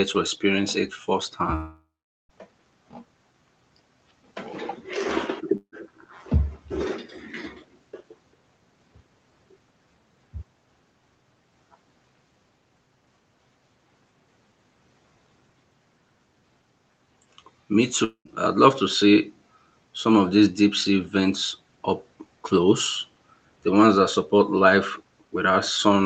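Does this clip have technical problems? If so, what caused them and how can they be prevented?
Yes. A long network dropout is heard at 1.55 to 2.31 s and again at 18.04 to 18.27 s. The last sound is stretched into a fading buzz that settles into silence, about 0.42 s of it in the first gap and 90 ms in the second. The speech then resumes with roughly 0.74 s and 0.22 s lost. This is likely a stall on the network link during which no audio reached the receiver. It can be prevented with a more stable connection, such as a wired link or a less congested network.

A burst of packet loss hits at 5.57 to 5.74 s. About 160 ms of audio never arrived in time. The receiver held the preceding sound and faded it, leaving about 80 ms of silence before playback jumped ahead past the missing stretch. Enabling Opus forward error correction and allowing a slightly deeper jitter buffer would cover short losses like this. 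The call path itself, Opus at 24 kbps with audio limited to 8 kHz, shows its usual coding character.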